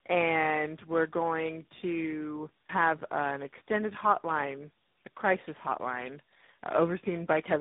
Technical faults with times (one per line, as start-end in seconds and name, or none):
0.00-7.61 tandem speech coding